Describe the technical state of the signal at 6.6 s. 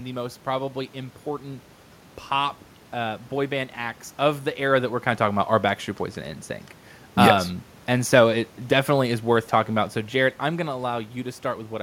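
At 6.6 s the speech signal is intact, with no technical fault, only the background noise of the room around the microphone.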